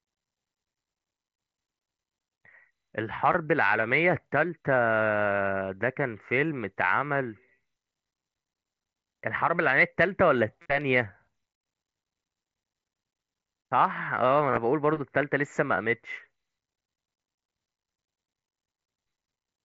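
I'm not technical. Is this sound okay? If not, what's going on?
No. The trouble is concealed Bluetooth headset packet loss: a few bits of speech never made it from the headset to the phone, and the phone filled each gap by repeating a snippet of what came just before. At 3.33 s the gap is tiny. At 10.62 to 10.66 s and again at 14.51 to 14.57 s, the patches last longer and sound like a brief buzzy hum with a slight wobble as normal speech returns.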